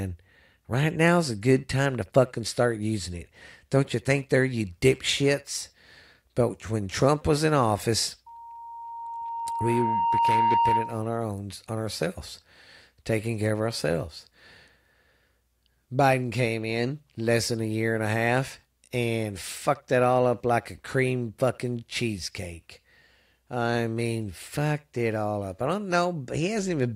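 A microphone picked up the loudspeaker it was feeding, and the loop's gain exceeded one at 930 Hz, causing loudspeaker feedback squeal from 8.26 to 11.16 s: a pure tone swells over about two seconds until it sits a few decibels above the speech.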